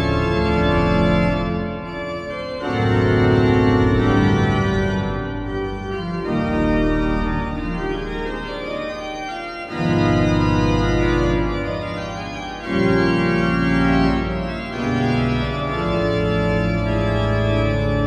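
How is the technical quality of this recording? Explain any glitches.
No glitches or technical faults can be heard here.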